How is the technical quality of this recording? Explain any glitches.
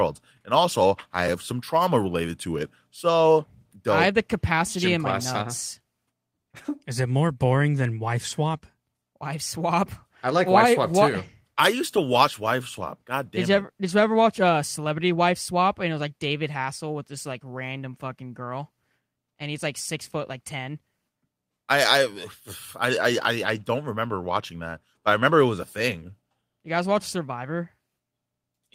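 The recording has no technical faults, and the speech signal stays continuous and intact throughout.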